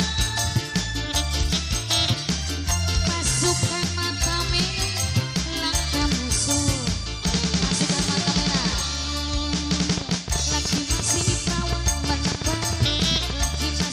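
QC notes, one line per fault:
9.89 to 13.83 s: train of clicks, about 30 similar pops at an irregular 7.9 per second, peaking roughly 10 dB above the sound. Likely interference, not isolated dropouts.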